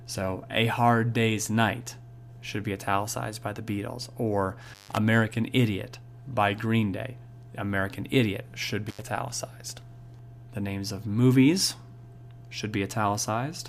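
At 4.65 s the audio suffers an intermittent contact dropout lasting until 4.98 s. A loose connection in the signal path breaks for roughly 147 ms, so the sound cuts out entirely, with crackle where the contact opens and closes and faint hiss in the gap. The same fault recurs between 8.87 and 9.02 s, this time with a shorter break of about 82 ms, bracketed by similar crackle.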